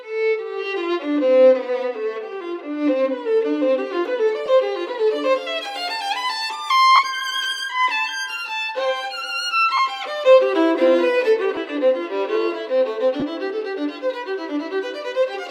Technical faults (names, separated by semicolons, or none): lost LE Audio frames